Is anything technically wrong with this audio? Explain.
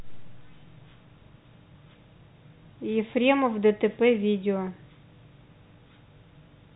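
No, nothing is technically wrong: the speech carries the expected narrowband telephone character, with nothing above about 3.9 kHz, as G.711 telephone coding produces.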